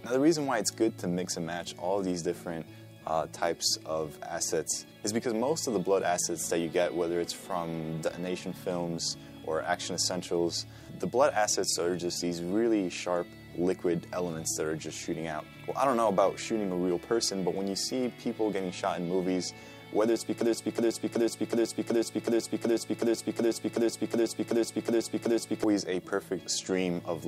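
From 20.41 s to 25.64 s the audio falls into a broken-record loop: a fragment of about 0.37 s (372.77 ms) plays 14 times back to back with no variation, so the sound stutters mechanically instead of moving on. Whatever should have been heard in those five seconds is gone. The likely cause is a player or stream that stalled and kept resending its last buffered piece. On a waveform or spectrogram the same block appears as a tiled, identical pattern repeating every 0.37 s.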